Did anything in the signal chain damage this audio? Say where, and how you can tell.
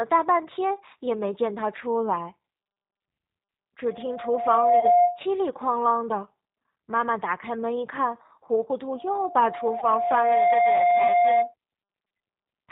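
Yes. At the codec stage, G.729 at 8 kbit/s rebuilds the speech from a filter and sparse pulses throughout, leaving it band-limited below 4 kHz, rough and synthetic.

On the network, packets were lost at 2.85–2.93, 4.80–4.87, 9.79–9.86 and 12.08–12.11 s. The decoder extrapolated through each gap, so the sound turns briefly buzzy and faded.

In the room, a microphone picked up its own loudspeaker, causing loudspeaker feedback squeal. A 706 Hz tone swells from 3.90 to 5.25 s, reaching about 10 dB over the speech. It swells again from 8.93 to 11.54 s, reaching about 5 dB over.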